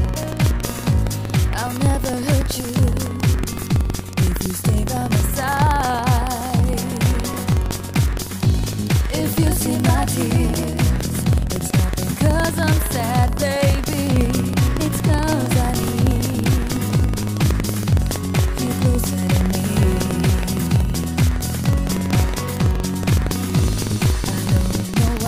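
Buffer tearing runs throughout: a steady robotic rattle at 21.5 Hz, which fits a 2048-sample buffer. Each period splices in a small sliver of audio from roughly a fifth of a second earlier, with hard joins. Unlike random dropouts, it is strictly periodic and vanishes in silence.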